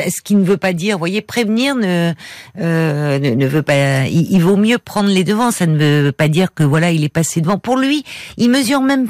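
Hard clipping runs through the whole speech clip: the signal is driven about 4 dB past what the stage can carry, so around two percent of samples hit the ceiling. Peaks crackle, the waveform shows flattened tops, and the spectrogram shows vertical smears of high harmonics.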